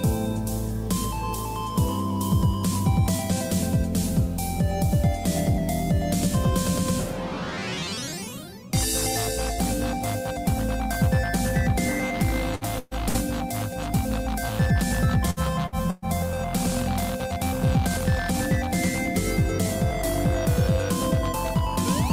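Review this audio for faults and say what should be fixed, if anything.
Short stretches of sound are held and fade before skipping ahead at 12.55, 12.79, 13.09, 15.30, 15.67 and 15.90 s. This is a burst of packet loss: 60 to 120 ms dropped, concealed, then playback resumes further on. Jitter buffering or forward error correction would prevent it.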